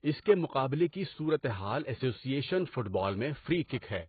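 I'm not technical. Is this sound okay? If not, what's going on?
No. The whole clip sounds dull and muffled, with a watery, fizzy edge on hissy sounds. Nothing comes through above about 4.5 kHz. This points to heavy AAC compression, which was likely squeezed hard to save space and threw away detail.

There is also a pre-echo from 3.65 to 3.70 s. A short hiss arrives just before a sharp sound, about 46 ms early. The compression smeared noise backwards in time, so the attack sounds blurred.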